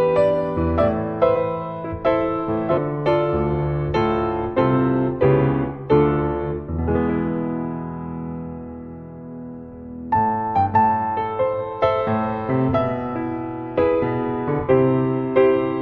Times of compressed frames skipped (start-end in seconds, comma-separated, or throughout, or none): 1.35, 2.77